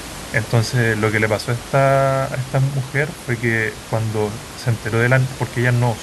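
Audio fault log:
Nothing stood out on listening to this speech, with only the room's own background noise audible at about 15 dB below the voice.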